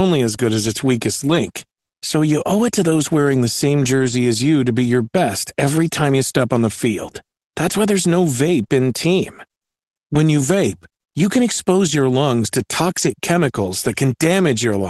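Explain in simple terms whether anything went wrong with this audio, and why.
Lost packet rebuilt from error correction at 1.29–1.35 s (after "good as its weakest"), 3.95–4.13 s, 7.69 s, 8.63–8.65 s (after "why there's no") and 12.90–13.08 s (after "expose your lungs to"). Pieces of the call went missing in transit, and the decoder played rough backup copies carried in the next packets, so there is no gap, only briefly grainier, noisier sound.

Short concealed packet loss at 8.67–8.72 s, just after the 8.63 s repair. About 20 ms never arrived, and the receiver filled the hole by stretching the preceding sound. It comes across as a tiny smear or wobble.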